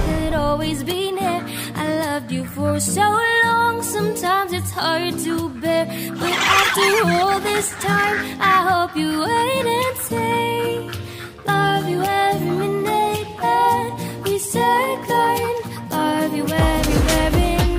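No technical faults can be heard anywhere in this recording. Nothing in it stands out as a problem to point to at any moment.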